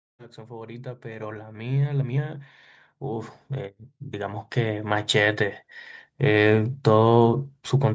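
Automatic gain rising at 0.47 to 2.47 s and again at 4.12 to 5.48 s in this speech clip: the gain control, judging the input too quiet, lifts voice and background together by about 10 dB, then about 6 dB.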